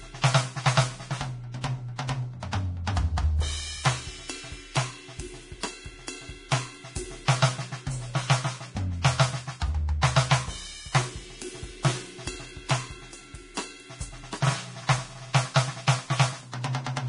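Throughout the music, the treble is hissy and grainy, with roughened tones and soft attacks, and nothing sounds above 10.6 kHz. This is likely heavy Vorbis compression, coarse enough to point to a rate near 32 kbps. A spectrogram shows a flat ceiling and speckled high bands.

From 9.02 to 9.04 s comes pre-echo: a hiss about 27 ms long runs ahead of an attack, because the codec's block noise spills into the quiet before it. On the waveform, a thin fuzzy smear precedes the sharp onset.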